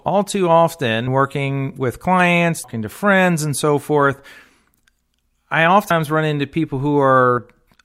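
Speech that jumps forward at 1.07 s (between "all too" and "working with clients"), 2.64 s (before "to friends and so"), 5.9 s and 7.38 s. Each jump drops around 200 to 400 ms of audio. This is compressed frames skipped: whole frames, consistent with about 32 ms each, were missing or rejected by the decoder.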